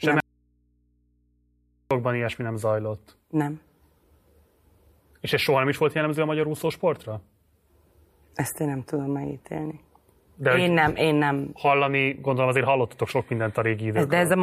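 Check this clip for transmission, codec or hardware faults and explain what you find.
An audio dropout to a faint residue runs from 0.20 to 1.91 s, about 1.7 s, ending just before "ilyesmi nem zajlott". The speech is likely lost at a break upstream while the input after it stays open, so nothing wanted reaches the output. The speech stops abruptly rather than pausing or fading, and the gap holds only mains hum, roughly 45 dB below the speech. The speech then snaps back in mid-flow.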